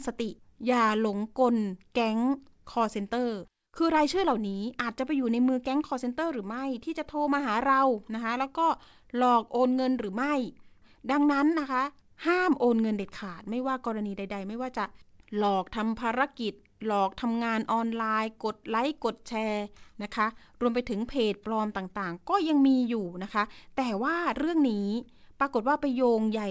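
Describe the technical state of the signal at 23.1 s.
At 23.1 s the speech is intact, carried cleanly through the call path with nothing above 8 kHz.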